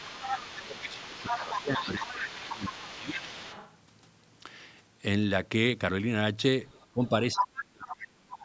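A speech recording in which, from 0.0 to 3.76 s and again from 6.69 to 7.62 s, a second, fainter voice runs underneath the main talker at roughly 10 dB below it. This is the other side's voice leaking through, likely because the far end was playing from a loudspeaker and the echo canceller left part of it in the microphone signal. On a spectrogram it shows as a separate, weaker set of harmonic stripes interleaved with the talker's own, and it stops at the same 8 kHz ceiling as the rest of the call audio. Overlapping those stretches, from 0.1 to 3.35 s and from 6.92 to 8.44 s, the talker's own level sags and breaks up. That is speech suppressed in double talk, likely the canceller turning everything down while both sides spoke. In the waveform the envelope visibly dips, by around 15 dB in the first stretch and much deeper, around 35 dB, in the second, where the audio nearly cuts out.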